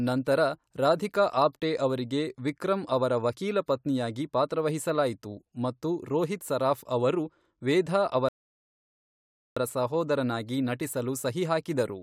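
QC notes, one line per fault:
8.29–9.57 s, rebuffering stall: the speech drops into about 1.28 s of silence, then picks up exactly where it broke off with nothing skipped. The player exhausted its downloaded audio and paused until more data arrived, so time is added rather than content lost.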